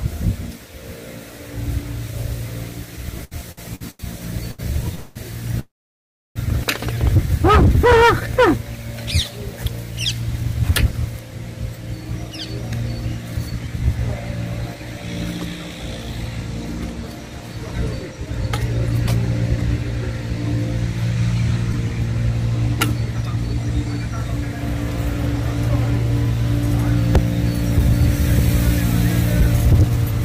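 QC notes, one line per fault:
3.21–4.61 s, repeated stalls (stutter): six short gaps, the longest about 85 ms, together 350 ms, about a quarter of this span. Each is filled by stretching the last sound, so it drags and catches. A spectrogram shows smeared, repeated frames where onsets should be. Nothing is lost.
4.95–5.18 s, call audio freeze: a 211 ms hold of the last sound, heard as a buzzy sustain before the audio resumes unchanged, so the hold is inserted time. Likely cause: delayed packets emptying the jitter buffer. The waveform shows a flat repeating texture, with horizontal streaks on a spectrogram.
5.60–6.38 s, call audio freeze: a 759 ms stall in which the held sound fades and then about 670 ms of silence follows before playback resumes where it stopped. Likely cause: held-up packets draining the jitter buffer. A brief smeared tail, then an empty band on the spectrogram.
12.31–18.27 s and 21.15–30.21 s, jitter buffer speed-up: playback runs at about 102% with unchanged pitch, as the receiver drops pitch-period-sized pieces to shrink excess buffered delay. 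Roughly 150 ms and 200 ms are removed. The spectrogram shows subtle compression with tiny splice discontinuities.
21.73 s, short concealed packet loss: about 20 ms missing, with only a few milliseconds patched by continuing the last sound before blending back. It leaves a brief smear or wobble. The waveform shows a short discontinuity, and a narrow vertical blur on the spectrogram.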